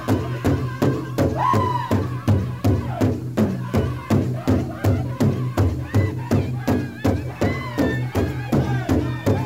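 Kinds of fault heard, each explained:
Low bit depth without dither, throughout: A grainy, gritty distortion rides on the sound and changes character as the level moves, roughening the quiet passages most, with the faintest moments sputtering or dropping out. The likely cause is coarse quantisation, consistent with 8 bits truncated rather than dithered, so the rounding error tracks the signal instead of forming a steady hiss. That error sits roughly 35 dB below the signal.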